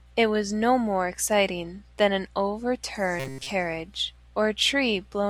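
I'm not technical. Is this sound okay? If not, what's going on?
No. From 3.20 to 3.50 s, the voice turns into a metallic buzz. This is robotic sound from repeated short buffers. Audio likely arrived late, so tiny snippets were replayed.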